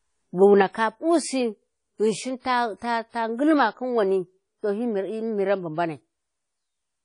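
From the first moment the speech has a ringing, washy quality, with a hiss that swells and recedes along with the voice, and the top end stops short at about 10.1 kHz. The damage is plainly audible, and it is likely WMA compression at a low bitrate, consistent with roughly 32 kbps. The transform codec spreads its quantisation error across long blocks, smearing noise around each sound, and zeroes weak spectral lines, which strips out detail.

At 0.62 s the whole signal abruptly steps down by about 6 dB and stays at that lower level through to the end. The voice and the background noise drop together in a single instant, with no fade between the two levels. That pattern points to a sudden gain jump, likely a digital gain change applied from one sample to the next without any ramp to smooth the transition.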